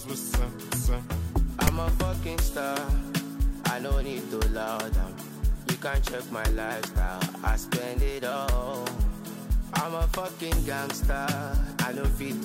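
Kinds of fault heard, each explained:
File tags played as audio: a block of text metadata was decoded as sample data rather than skipped, so at 1.67 s a very brief, loud rasp with hard edges breaks in, its waveform shifted to one side of zero.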